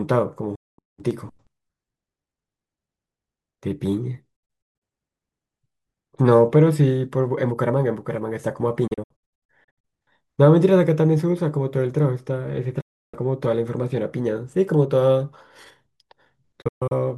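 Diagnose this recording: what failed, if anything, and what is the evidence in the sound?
The failure is a digital broadcast dropout at the receiver's decoding stage. The speech mutes with a quick fade of about 8 ms at 0.55 to 0.79 s and 12.81 to 13.14 s. It breaks into several short holes across 4.36 to 4.82 s, 8.87 to 9.85 s and 16.62 to 16.98 s. The receiver is throwing away frames that fail their checks and staying muted until clean ones arrive, and the gap lengths fit 32 ms frames. Whatever was said in those holes is gone.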